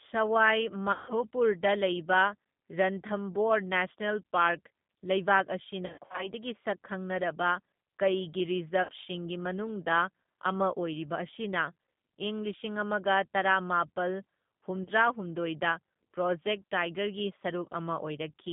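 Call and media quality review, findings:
G.729 codec, throughout: speech band-limited to roughly 150 Hz–3.6 kHz, nothing above 4 kHz, plainly rough, synthetic texture. 8 kbit/s CELP rebuilds speech from vocal-tract filter, pitch predictor and sparse pulses per 10 ms frame.

VoIP packet loss concealed by the speech codec at 0.92–1.15 s, 5.86–6.30 s, 8.83–8.91 s, 14.83–14.88 s: stretched, fading buzzy tone or coloured noise, then weak speech recovery. Decoder extrapolates last pitch and filter with falling gain. Gaps of 160, 180 (scattered, longest 60), 60 and 20 ms.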